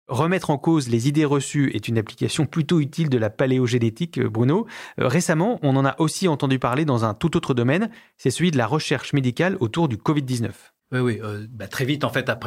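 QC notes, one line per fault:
No faults found on this speech clip.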